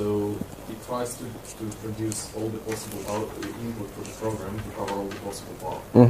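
No technical faults can be heard anywhere in the audio.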